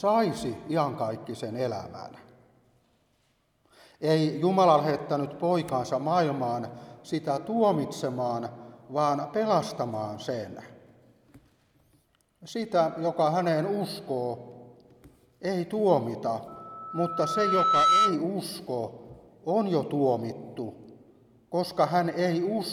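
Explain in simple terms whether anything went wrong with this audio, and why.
A microphone picked up the loudspeaker it was feeding, causing loudspeaker feedback squeal: from 16.48 to 18.22 s, a 1.3 kHz tone swells over about a second and a half into a loud whistle.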